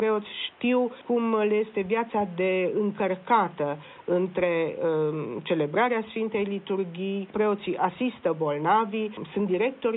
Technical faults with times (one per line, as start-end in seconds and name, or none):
none